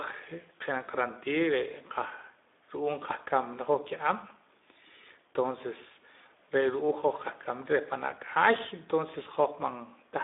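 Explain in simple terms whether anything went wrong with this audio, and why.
Speex codec damage runs through the whole clip, from the first second to the last. Speex is an older speech codec from internet calling and game chat. It rebuilds speech from a rough model instead of storing the actual sound. With too little data to work with, the rebuilt speech comes out hoarse and noisy. The sound also passes through a narrow phone-style band, roughly 250 Hz to 3.6 kHz, so it is thin, with muffled highs and weak lows.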